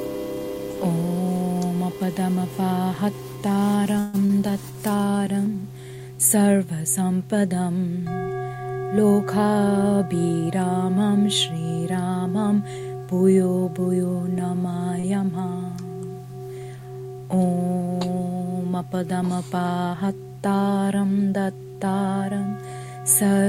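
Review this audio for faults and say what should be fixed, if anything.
At 3.99 to 4.16 s the sound freezes: the last bit of audio is carried on for about 141 ms, then playback picks up exactly where it left off. Nothing is lost, but a 141 ms gap gets pushed into the timeline. That's the signature of a call audio freeze, most likely packets held up in transit so the jitter buffer ran dry and the receiver had to improvise. To prevent it, fix the network path causing the delay spikes, or give the jitter buffer more headroom.

Right after, at 4.26 to 4.31 s, there's a short concealed packet loss. About 40 ms of audio never reached the decoder in time, and the receiver covered the hole with 36 ms of made-up sound continued from what came before, then blended back into the real signal. You hear it as a brief smear, and whatever short detail sat in that slot is gone. To prevent it, cut the packet loss upstream, or add FEC or redundancy so lost frames can be rebuilt.

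There are two jitter buffer speed-ups. From 8.97 to 10.47 s the audio runs at 108% speed, with around 150 ms trimmed out. From 19.85 to 20.09 s it runs at 112%, with roughly 40 ms taken out. In both cases the buffer had more audio queued than it wanted, so the receiver kept snipping out tiny pitch-period chunks to catch up. Pitch stays put, but both stretches sound hurried. To prevent it, smooth out the bursty packet arrival that overfills the buffer, or let the buffer drain more gently.

At 15.00 to 15.05 s there's a short stall from a late packet. The packet wasn't there on time, so the receiver held the last sound for about 33 ms until it showed up, then carried on from the same spot. Nothing is missing, but that moment lingers a touch too long and the delay grows by 33 ms. To prevent it, deal with the same delay jitter, or run a slightly deeper buffer.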